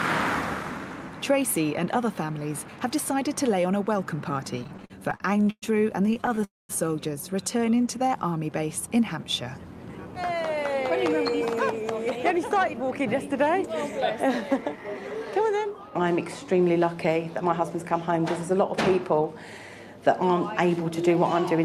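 The audio starts to drag at 4.59 s with repeated stalls (stutter): twelve little hiccups through 5.64 s, the longest about 117 ms, where the receiver kept stretching the last sound because packets weren't arriving fast enough. Roughly 29% of that stretch is filler, and nothing is lost. A second, lighter stutter runs from 6.06 to 6.44 s with eight tiny gaps of 14 ms or less. It runs straight into a call audio freeze from 6.44 to 6.71 s. The sound hangs, fades, and then goes silent for about 0.2 s before picking up where it left off, which pushes everything 248 ms later. That's likely packets held up in the network, draining the jitter buffer completely. Between 7.52 and 8.23 s there's a jitter buffer slow-down. The receiver repeated tiny pitch-period slices to rebuild its reserve, adding 91 ms, so this bit plays at 88% speed with the pitch unchanged and sounds slightly drawn out. Then come two jitter buffer speed-ups, from 10.05 to 13.27 s and from 17.45 to 19.29 s. 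Both run at 106% as the buffer trims off excess delay by cutting short pieces, about 0.2 s in the first and about 0.1 s in the second, so those sections feel a touch hurried.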